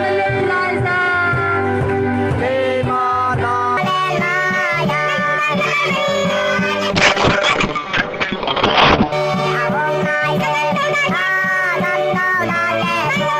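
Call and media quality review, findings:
Section at the wrong speed, 3.77 s to end: audio runs 1.52x fast, pitch up about seven semitones; likely resampling to a wrong clock. Spectrogram shows harmonics stepping upward at onset.

Call bitrate drop, 6.90–9.18 s: Opus encoder falls from 96 to 7 kbps, rough and muffled sound, bandwidth cut from 20 kHz to 6 kHz; spectrogram shows energy above 6 kHz vanishing.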